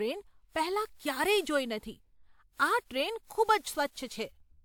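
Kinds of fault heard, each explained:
Generation loss: the speech sounds swirly, smeared and hollow, more than one encode at this quality would explain, likely from about seven rounds of lossy re-encoding with a WMA-type codec at what fits 128 kbit/s. Each pass requantises on a shifted frame grid, so errors pile up and consonant attacks soften. A spectrogram shows patchy holes and flickering blocks through the mid and upper bands, with content ending near 20.1 kHz. The waveform shows rounded, blunted onsets.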